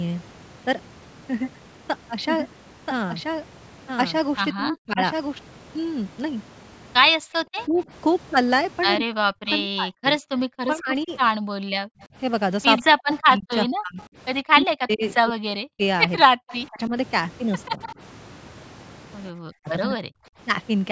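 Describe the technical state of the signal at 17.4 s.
At 17.4 s the talker is being pushed down, likely speech suppressed in double talk (7.18 to 20.13 s): the canceller ducks its own talker together with the loudspeaker echo, with dips near 40 dB, unlike a steady level loss. An echo leak (16.12 to 17.95 s) also comes back, likely from a loudspeaker end, as a copy 134 ms late and about 15 dB down, which sets it apart from room reverb.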